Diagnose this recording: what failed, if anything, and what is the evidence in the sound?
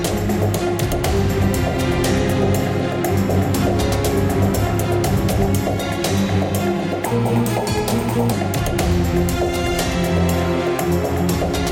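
From 7.06 to 8.32 s the sound jumps up about three semitones and hurries along at 1.2 times normal speed, then drops back. This section at the wrong speed likely comes from an edit or playback step resampling that stretch against a mismatched clock.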